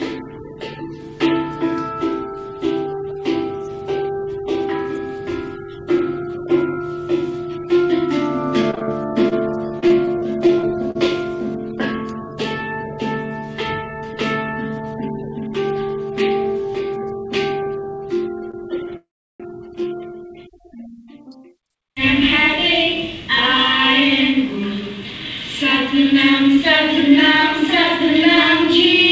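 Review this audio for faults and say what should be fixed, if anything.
Repeated packet loss (robotic sound) runs from 8.62 to 10.97 s. There are 14 short holes, the longest 42 ms, covering about 11% of the span. Each is patched by extending the previous sound, giving a choppy texture. Unlike a single stall, pieces of audio are actually missing. Stronger forward error correction or redundancy would prevent it.

A short stall from a late packet occurs at 18.51–18.55 s. The jitter buffer ran dry, and the last sound was stretched by 26 ms before playback resumed where it left off. It sounds like a brief held sound or buzz rather than choppiness, and nothing is lost. A slightly deeper jitter buffer would absorb this.

A call audio freeze follows at 18.97–19.42 s. The sound stops for about 430 ms: a fading held tail, then about 340 ms of silence, and playback resumes without anything skipped. 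It is far longer than the stall, and the likely cause is packets held up in the network. Improving network stability or the buffer margin would address it.

Jitter buffer speed-up appears at 21.07–22.23 s, running at 108% speed with about a tenth of a second trimmed, and at 26.04–28.99 s at 102% with less trimmed. The pitch stays the same while the timing hurries, which separates it from resampling. Smoother delay adaptation would make this less audible.

The call path itself carries nothing above 8 kHz, which fits G.722 at 64 kbps.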